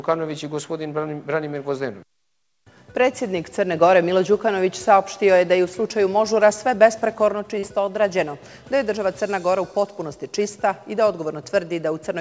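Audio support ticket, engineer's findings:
Short concealed packet loss, 7.59–7.65 s: 40 ms of packets missed the decoder deadline. Concealment extended the preceding sound, heard as a brief smear before blending back.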